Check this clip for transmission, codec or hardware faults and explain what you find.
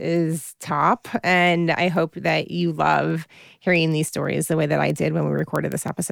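One hardware fault runs through this speech clip: word clock ticks, from 0.16 s to 6.05 s. A clock mismatch of roughly 150 ppm between sender and receiver on a digital link makes the clocks slip past each other about every 0.15 s, roughly 40 times. At each slip one sample is dropped or repeated, giving sharp ticks of uneven strength at a steady rate. A spectrogram shows evenly spaced thin broadband vertical lines, and the waveform shows tiny single-sample steps.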